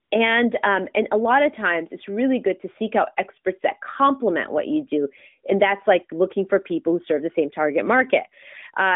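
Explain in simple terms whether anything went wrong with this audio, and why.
Something went wrong near the very start. From 0.04 to 0.12 s, AMR comfort noise replaced the real background with smooth, artificial hiss because the phone briefly stopped sending speech.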